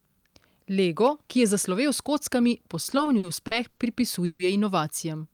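From 2.83 to 3.80 s the speech drags and stutters in seven short hitches, the longest 80 ms, about 220 ms of filler in all. These are repeated stalls (stutter): packets arrived late, the jitter buffer kept emptying, and the receiver stretched the last sound until delivery resumed.

At 4.25 to 4.42 s the sound briefly hangs as a 140 ms buzzy continuation, never dropping to silence, then carries on intact. This is a call audio freeze, likely from packets held up in transit draining the jitter buffer.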